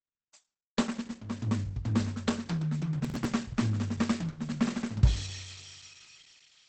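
From the start the music sounds muffled and hoarse, with a hard spectral ceiling at 8.5 kHz on a spectrogram and nothing above it. The likely cause is Opus compression running in its speech-oriented SILK mode, and the damage fits a low bitrate near 16 kbps.

From 3.05 to 3.25 s a burst of processor overload crackle tears across the sound. The processor misses several buffer deadlines in a row, and each miss replays a scrap of old audio with hard edges, which fits buffers of around 5 ms. The waveform shows abrupt steps at the joins, and the spectrogram shows thin vertical broadband streaks.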